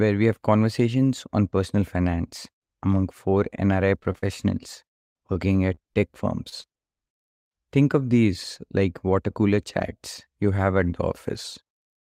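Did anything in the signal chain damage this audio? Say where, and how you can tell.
Yes, the damage happened on the network path, where packets were lost and the decoder had to conceal the gaps. The first problem is repeated packet loss, which gives a robotic sound from 3.99 to 4.28 s and again from 5.33 to 5.97 s. Each stretch has four gaps. In the first stretch the longest gap is 40 ms and about a third of the span is concealed. In the second the longest gap is 25 ms and the concealed share is around a tenth. The receiver keeps stretching the last frame into each hole, so the speech turns choppy with pieces missing. On a spectrogram these patches show as short blocks of frozen, smeared harmonics with hard frame edges, followed by a slightly misaligned restart.

The second problem is short concealed packet loss at 6.49–6.54 s, 6.62–6.66 s and 6.78–6.81 s. Each event lost about 20 ms of audio, and the decoder filled between 15 and 25 ms by extrapolating the preceding sound and then crossfading back into the real signal. 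Each one is heard as a quick smear or wobble. On the waveform you see a brief section whose envelope looks copied from just before it, and on the spectrogram a thin vertical seam where the detail blurs.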